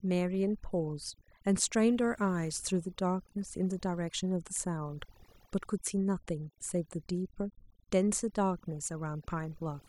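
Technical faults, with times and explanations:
Throughout: overdone noise removal. The noise reduction was pushed far too hard on a noisy speech recording, so any frequency band sitting near the tool's noise estimate gets pulled way down or switched off entirely. That takes the quieter parts of the voice along with the noise. What you're left with is a background that drops away and breaks up into little twinkling, warbling specks.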